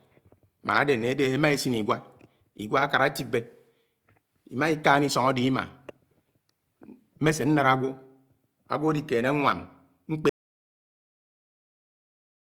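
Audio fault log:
10.29–12.55 s, audio dropout to silence: the speech cuts off abruptly mid-flow and the last 2.26 s of the clip are dead silence, with no room tone or background hiss, running straight to the end without recovery. That total absence of noise points to the input signal being lost, likely through a disconnected device, a failed link or an accidental mute, while recording carried on writing silence, so whatever followed is unrecoverable.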